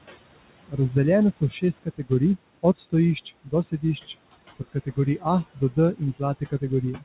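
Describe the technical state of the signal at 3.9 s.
At 3.9 s the sound falls inside a stretch of speech cut by the noise suppressor, running from 3.25 to 4.14 s. The suppressor misjudged parts of the speech as background noise and pulled them down along with it, by about 17 dB at the deepest point and over roughly a fifth of a second in total across the span. The affected parts sound swallowed and faint rather than missing. Unlike a packet loss dropout, the signal never breaks off abruptly into silence or a click. It sinks and returns smoothly, following the suppressor's gain.

The same moment also carries the noise suppressor artifacts present through the whole clip. The suppressor cuts what it treats as steady noise by about 20 dB, frame by frame, so the residue of the room noise, which sits about 15 dB below the speech, swells under the speech and drops away around it. This differs from codec coding noise, which stays bound to the signal rather than pumping with it. 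The G.711 A-law call path is also audible here as a band limit with nothing above 4 kHz.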